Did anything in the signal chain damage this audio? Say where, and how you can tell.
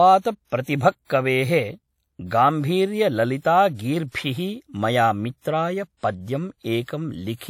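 Yes, at the codec: a ringing, washy hiss that swells and fades with the speech, with nothing above 17.5 kHz, is likely WMA compression at around 48 kbps, unlike steady analogue noise.

Pre-echo, also from the codec: brief hiss smears in before attacks at 0.62 to 0.67, 0.78 to 0.81, 1.05 to 1.10 and 6.87 s, as block-wide quantisation noise spills ahead of each onset, rather than following it like reverb.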